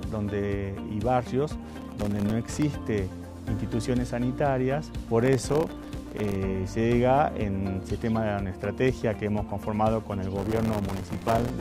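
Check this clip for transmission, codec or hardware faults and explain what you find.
Three bursts of processor overload crackle break up the clip, at 1.68 to 2.62 s, 5.22 to 6.35 s and 10.38 to 11.50 s. Each is a gritty, tearing crackle riding on the sound, densest in the last burst. The processor is failing to finish its very short buffers, around a millisecond and a half each, before their deadlines. Every miss drops in a sliver of silence with hard edges. Dozens of misses occur in the first two bursts, and a couple of hundred in the last.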